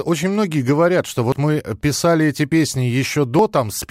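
At 1.32 s the speech jumps abruptly, and a short piece of sound, around 40 ms, is simply missing. The two sides butt together with no gap. Shorter skips of roughly 20 ms follow at 2.52 s and 3.39 s, each heard as a jump. This is likely a dropped buffer (overrun), where the capture side overwrote samples the program had not yet read.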